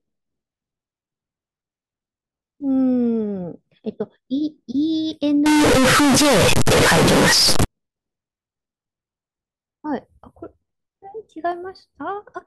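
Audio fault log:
5.46–7.65 s, float read as integer: for about two seconds the speech suddenly turns into a blast of very loud, harsh, buzzy distortion, with the background noise pushed up as loud as the talking, though you can still follow the pitch. That's likely 32-bit float samples being read as 32-bit integers, so the sign and exponent bits set the level and squash everything into a near-square wave at an almost fixed, high level, however quiet the original was.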